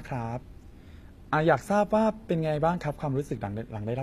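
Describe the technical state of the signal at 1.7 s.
The signal at 1.7 s, as throughout the clip, has likely passed through HE-AAC compression at a low rate consistent with about 24 kbps. The treble is rebuilt by copying lower bands upward, so sibilants sound gritty and metallic, the damage plainly audible, with nothing above 14.9 kHz.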